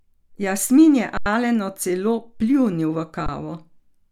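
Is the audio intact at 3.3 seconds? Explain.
No. From 3.26 to 3.29 s there is an underrun with held sample: the output buffer ran dry for about 21 ms, which fits a 1024-sample buffer, and the converter held its last value. The waveform shows a flat line and the spectrogram a blank vertical strip. The speech briefly stops and then resumes where it left off, with only a soft edge.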